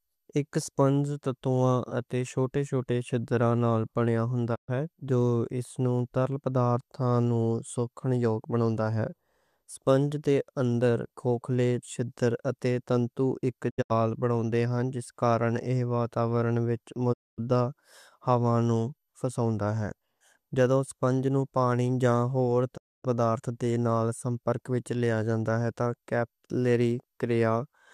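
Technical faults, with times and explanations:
4.54–4.70 s, 13.69–13.92 s, 17.12–17.40 s, 22.76–23.06 s: digital broadcast dropout. The receiver lost good frames and muted, fading to silence over 20 ms. The gaps last 120, 144, 240 and 264 ms, and the audio sent during them is gone. The second dropout breaks into short holes, the longest 72 ms, between "چھِدر اتے تنتو ایک" and "بناؤندے ہن".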